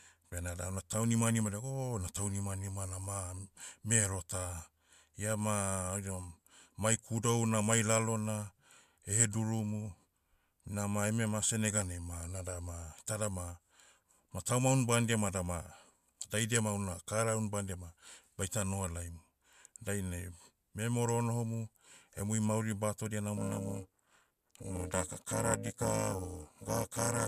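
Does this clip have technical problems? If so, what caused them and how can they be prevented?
Yes. From 23.37 s to the end at 27.27 s, just after "onohomu emui mauri batodia", the speech turns into a harsh, metallic buzz at around 400 Hz. This is overlap-add ripple. The audio was split into windowed frames and rejoined with an overlap whose gains don't add up to a constant, so the level swings by about 60 dB once per frame. Prevent it by pairing the window shape with a hop size that meets the constant-overlap-add condition.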